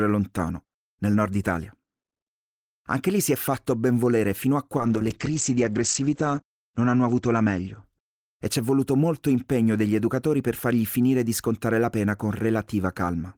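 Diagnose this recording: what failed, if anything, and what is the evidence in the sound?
What failed here is a call bitrate drop, sitting between the network and the codec. From 4.78 s to 9.05 s the speech goes rough and muffled, with the top end gone. That fits the bandwidth estimate falling and the encoder being pushed from 32 kbps down to 12 kbps. At that rate it codes more coarsely and narrows the audio band from 20 kHz to 8 kHz. The worst stretch lasts about 1.2 s before the rate climbs back.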